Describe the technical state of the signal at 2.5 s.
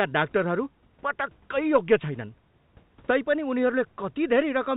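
At 2.5 s the speech is intact, with no dropout, glitch or distortion, only the narrow telephone bandwidth of the G.711 call path, with nothing above 4 kHz, and a low room noise about 38 dB beneath the speech.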